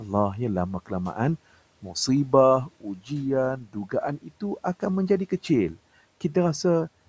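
Speech is cut by the noise suppressor at 2.66 to 3.1 s, 3.64 to 3.93 s and 4.22 to 4.42 s. Parts of the speech are mistaken for noise and turned down, by about 12, 11 and 11 dB. Each cut sounds faint and swallowed.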